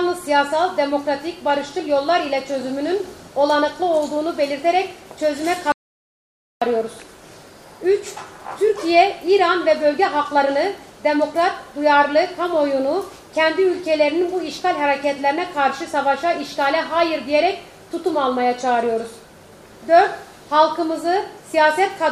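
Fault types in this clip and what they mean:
Audio dropout to silence: from 5.72 to 6.62 s the sound cuts off mid-flow into about 0.9 s of silence, likely a lost input link or mute, and resumes abruptly; unlike a noise gate or quiet pause, no room tone survives underneath.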